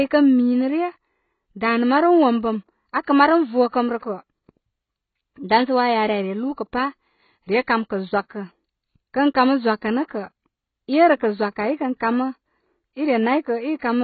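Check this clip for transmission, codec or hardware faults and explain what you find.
There is one fault: AAC compression affects the whole clip. The speech has nothing above 4.5 kHz and is heavily damaged, with a dull, smeared quality and a fizzy, warbling edge on sibilants and held sounds. This is likely AAC-LC coding at a very low bitrate, around 16 kbps. The encoder lowered its cut-off and quantised the remaining bands coarsely against its hearing model, leaving spectral holes and smearing.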